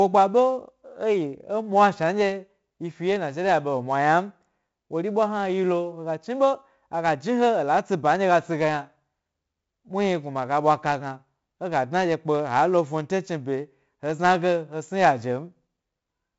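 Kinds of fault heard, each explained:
4-bit ADPCM compression: every sample is coded as a coarse 4-bit step from a running prediction, so a gritty hiss rides along with the speech for the whole clip and swells on louder syllables. The damage is heavy, and nothing comes through above about 7.7 kHz, which fits a 64 kbps stream.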